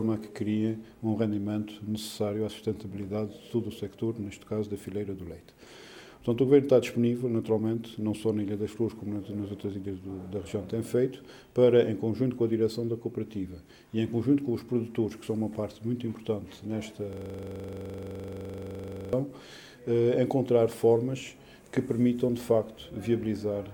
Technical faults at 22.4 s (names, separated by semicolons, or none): none